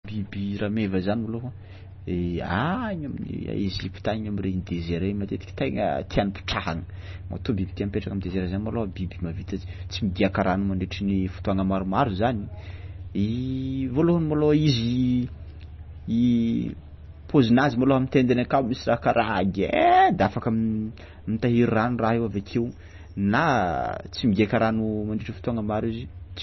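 From start to finish the speech has nothing above 5.9 kHz and a watery, swirling texture, with chirpy sibilants and smeared onsets, likely from heavy MP3 compression at a low bitrate.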